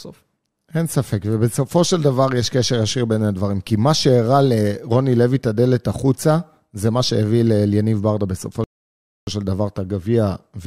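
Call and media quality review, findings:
Rebuffering stall, 8.64–9.27 s: speech drops to dead silence for 631 ms, then resumes exactly where it stopped, with no content skipped. Player buffer underrun; download fell behind playback. Waveform: flat-line gap. Spectrogram: a clean blank vertical band with no smearing at either edge.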